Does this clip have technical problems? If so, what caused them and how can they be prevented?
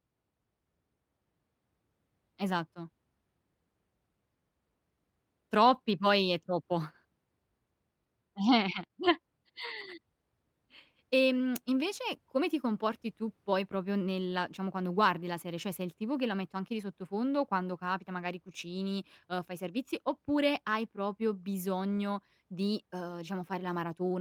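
Yes. Packets were lost in transit, and the packet after each carried a low-bitrate copy. Opus played that copy, so this is lost packet rebuilt from error correction. It occurs at 5.65–5.75 s, just before "poi è troppo", and at 8.75–8.85 s, both about 60 ms rebuilt. It recurs at 9.59–9.61 s and at 15.51–15.53 s (after "diciamo quando guardi la"), each about 20 ms. There is no gap, but those moments sound rougher and noisier. A steadier network path, such as a wired connection with less congestion, would keep packets from being lost in the first place.

At 8.87–8.91 s there is a short concealed packet loss. About 20 ms of audio arrived too late for the decoder, with no backup copy available. The receiver extrapolated the preceding sound to fill the hole and then blended back into the real audio, leaving a brief smear or wobble. A larger jitter buffer would let late packets still arrive in time.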